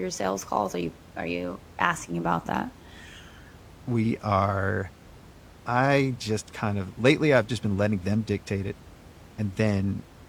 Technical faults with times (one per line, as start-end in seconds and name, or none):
none